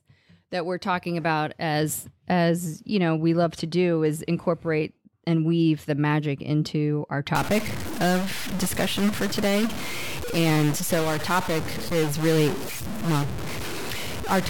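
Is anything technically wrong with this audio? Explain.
Yes. From 7.35 s to the end, the speech turns harsh and buzzy, and the pauses fill with noise. That's likely a stuck bit: one data bit pinned at a fixed value, throwing samples off by a step of roughly -25 dBFS and flipping with small-signal polarity.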